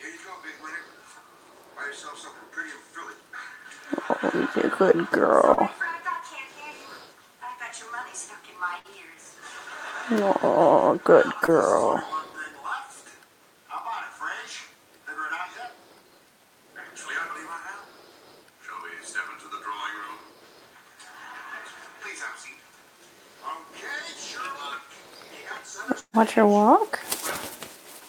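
At 5.53 to 5.59 s there is a short concealed packet loss: about 40 ms of audio failed to arrive and the receiver patched the hole by extrapolating the preceding sound before crossfading back. It comes across as a brief smear. The same fault recurs at 11.46 to 11.50 s, shorter at about 20 ms, heard as a brief smear.

At 8.79 to 8.86 s a burst of packet loss removes about 60 ms. The decoder sustains the last sound for roughly 50 ms, producing a held sound that fades before the audio resumes further along. In the waveform the envelope tapers smoothly. A longer burst at 26.00 to 26.15 s loses about 140 ms. The concealment decays into about 60 ms of silence, visible as a dark vertical band on the spectrogram and a flat line in the waveform.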